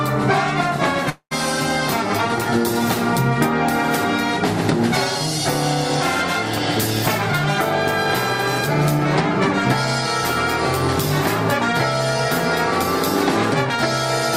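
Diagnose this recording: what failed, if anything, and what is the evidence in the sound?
Long network dropout from 1.09 to 1.33 s, at the network stage. The last sound carries on as a fading buzz for about 0.21 s, sinks to near silence, then resumes with roughly 0.22 s missing. This is likely packet loss, with the receiver's concealment filling the gap.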